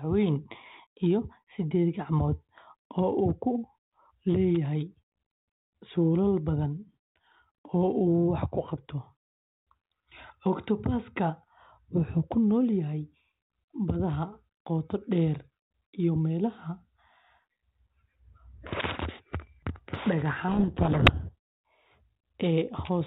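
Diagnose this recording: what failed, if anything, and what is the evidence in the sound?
At the codec stage, a codec payload misread from 20.48 to 21.34 s buries the speech in harsh distortion, consistent with the receiver reading G.726 code words in reversed bit order. Unlike the light hiss of the surrounding band-limited coding, which fits 32 kbit/s, this starts and stops abruptly.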